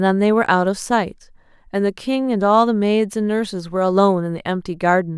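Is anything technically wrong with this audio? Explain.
No, no technical faults here.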